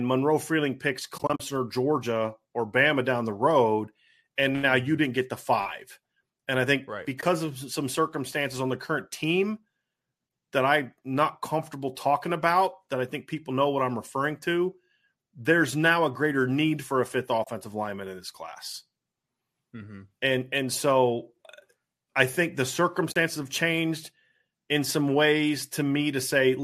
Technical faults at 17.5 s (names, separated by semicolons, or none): AAC frame loss with muting